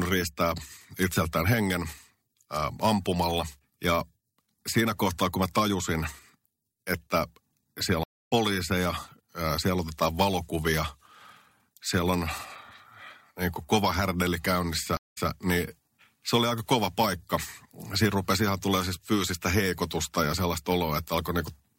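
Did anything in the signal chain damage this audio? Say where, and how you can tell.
Yes. After "että siellä", the speech cuts out for 196 ms (8.03–8.32 s) and resumes roughly 0.2 s later. After "niin kuin kova härdeli", a 114 ms gap (14.97–15.29 s) replays 209 ms. This is a network-stage stream reconnect: a fresh decoder rejoined mid-stream.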